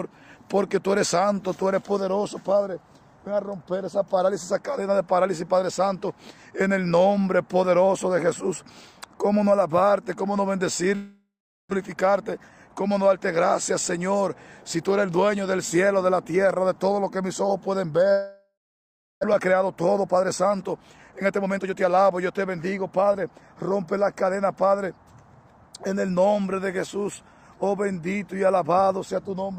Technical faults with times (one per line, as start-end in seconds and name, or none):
10.95-11.73 long network dropout
11.81-13.18 jitter buffer speed-up
18.12-19.25 long network dropout
19.33-23.56 jitter buffer speed-up